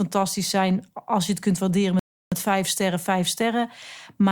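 A speech clip with a rebuffering stall. At 1.99 s the sound drops to silence, then resumes at 2.32 s exactly where it stopped. The player ran dry, adding 0.32 s.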